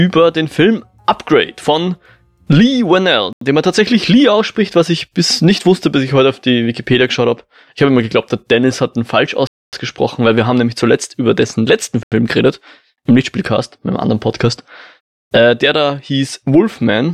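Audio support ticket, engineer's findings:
Hard cuts to dead silence: 3.33 to 3.41 s and 12.03 to 12.12 s (85 ms each), 9.47 to 9.73 s (256 ms). Block of digital silence: likely output buffer not filled in time, zeros played out. 85 ms fits a 4096-sample buffer at 48 kHz.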